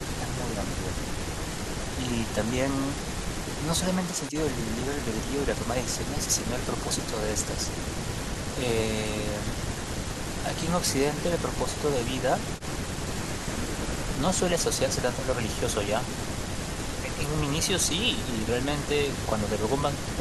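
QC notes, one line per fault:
No faults heard anywhere in the speech; nothing to log.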